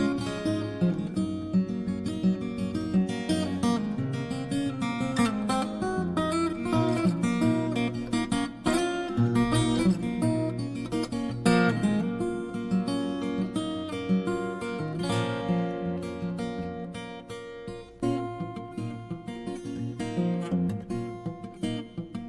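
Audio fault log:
No audible faults detected.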